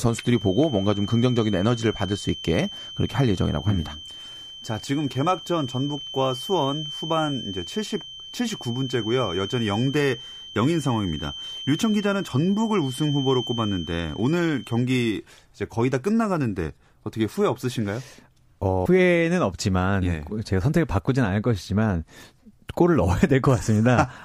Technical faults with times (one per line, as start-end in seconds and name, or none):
0.00-14.90 feedback whistle
18.82-18.86 damaged data in a compressed stream